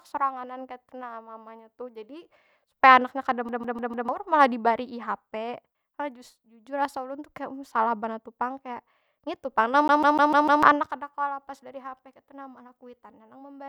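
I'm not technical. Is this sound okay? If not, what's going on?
No. At 3.49 to 4.09 s and again at 9.88 to 10.63 s, the speech stutters, repeating the same 0.15 s snippet four then five times. That's a CD stuck on one turn: a scratch keeps bouncing the laser back to the same spot.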